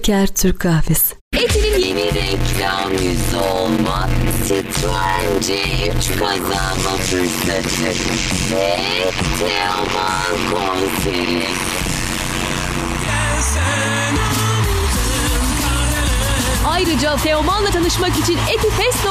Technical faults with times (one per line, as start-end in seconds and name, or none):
1.82-13.08 block size mismatch (padded)